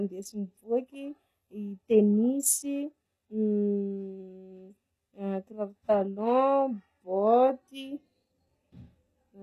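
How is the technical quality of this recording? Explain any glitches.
Technical quality is poor throughout the speech. Sibilants sound gritty and lispy, with nothing above 12.4 kHz. This is likely HE-AAC compression, which rebuilds the treble from copied lower bands and fits a very low bitrate of around 16 kbps.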